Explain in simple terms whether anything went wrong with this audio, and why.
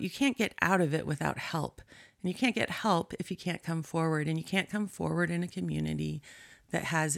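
Listening to the recording, nothing stood out as having gone wrong.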